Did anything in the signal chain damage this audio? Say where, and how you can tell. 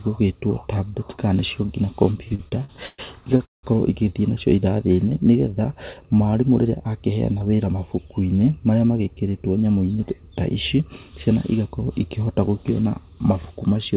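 Yes. From 2.28 to 3.65 s the speech drags and stutters through eleven brief holds, the longest 178 ms: repeated stalls at the jitter buffer, which ran dry and stretched the last sound while waiting.

From 6.64 to 7.73 s the speech sounds hurried, about 10% faster at unchanged pitch. This is jitter buffer speed-up, trimming roughly 150 ms of pitch periods to shed excess delay.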